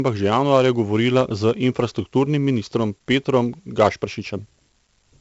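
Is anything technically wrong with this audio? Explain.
Yes. Throughout the speech there is 4-bit ADPCM compression, and the damage is heavy. Each sample is coded as a coarse 4-bit step from a predicted value, with the step size adapting as it goes. The resulting error is broadband noise that tracks the level of the speech, so a gritty hiss rides on every loud passage and sharp onsets distort where the step lags behind. Nothing sounds above about 7.8 kHz, which fits a 16 kHz sample rate, around 64 kbps, and dulls the top end.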